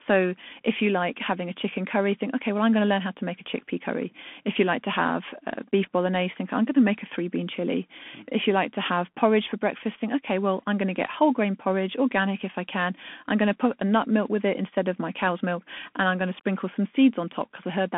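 From start to finish the speech sounds thin and boxy, with scratchy s sounds and a granular hiss beneath it. This is the Bluetooth CVSD headset codec: a one-bit slope coder, consistent with a 64 kbit/s stream, passing only about 200 Hz to 3.4 kHz.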